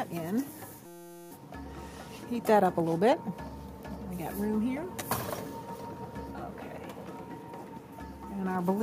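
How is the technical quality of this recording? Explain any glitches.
There's one clear glitch, a system hang loop from 0.86 to 1.31 s. Something upstream froze while the sound hardware kept replaying the same ring buffer, so a 5.8 ms slice of audio repeats exactly, 78 times over. A segment that short comes across as a steady buzz at about 172 Hz, which fits a 256-sample buffer. Once the loop releases, the sound picks up with essentially nothing missing.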